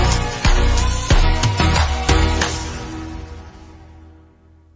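The whole clip suffers from a wrong sample rate. Everything runs at about 0.726 times its proper speed and sits about 5.55 semitones low, so the audio sounds slow, heavy and dragged down in pitch. This fits material captured at 22 kHz but played back at 16 kHz with no conversion. On a waveform, every event is stretched out in time. On a spectrogram, all frequency content, including any harmonic spacing, is squeezed downward by that same ratio.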